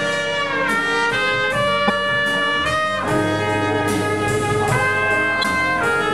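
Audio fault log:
1.84–1.90 s and 5.40–5.45 s: damaged data in a compressed stream. Each event lasts under 60 ms. Both sound like a brief squawk or blip cutting into the sound. Part of the encoded data at these points is wrong. The decoder cannot read those frames properly and loses sync. It outputs garbled audio until it finds the next valid frame header. That recovery is fast, so each burst stays short.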